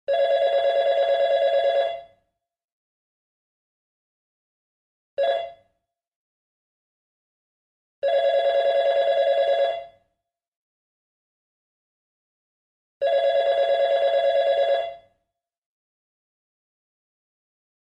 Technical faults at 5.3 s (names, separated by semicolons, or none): skip ahead; jitter buffer speed-up